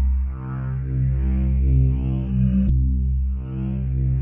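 From 1.43 s to the end, adaptive stream at a lower bitrate: the treble abruptly thins and turns synthetic, suggesting a switch to roughly 16 kbit/s HE-AAC; the spectrogram's upper band suddenly turns smeared and patchy.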